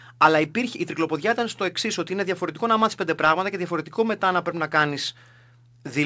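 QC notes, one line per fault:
No faults found; the speech carries the expected band limit of a wideband call path, with nothing above 8 kHz, consistent with G.722.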